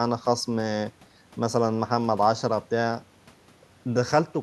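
A short stretch of speech with nothing technically wrong to point out anywhere in it.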